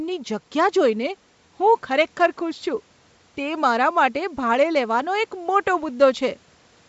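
Bluetooth LC3 compression, plainly audible throughout this speech recording, is the likely cause of the breathy, grainy edge on the voice. The upper spectrum sounds thinned and partly replaced by noise-like filler, which fits LC3 running around 48 kbps with 10 ms frames. Nothing reaches above 8 kHz, consistent with the call microphone processing, and faint room noise sits about 40 dB below the speech.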